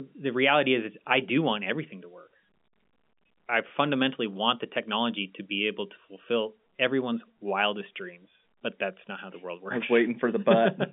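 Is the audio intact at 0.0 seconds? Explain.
Yes, the speech is intact at 0.0 seconds, carried cleanly through the G.711 telephone coding with no fault at that moment.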